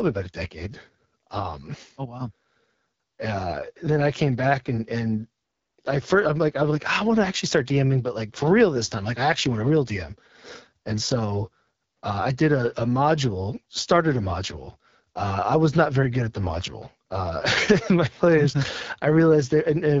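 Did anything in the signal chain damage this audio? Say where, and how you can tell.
Yes, at the codec stage: the speech has passed through the AMR wideband (HD Voice) codec, and the damage runs through the whole clip. It sounds rough and raspy throughout, with plainly audible coarseness, which points to one of the lowest AMR-WB rates, around 8.85 kbit/s. At that rate the pulse-driven vocal tract model has too few bits to code the speech below 6.4 kHz accurately, and the band from 6.4 to 7 kHz is filled with shaped noise.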